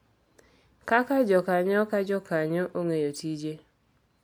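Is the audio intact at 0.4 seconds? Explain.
Yes, at 0.4 s the audio is intact, with no dropout, click, distortion or other fault at that moment.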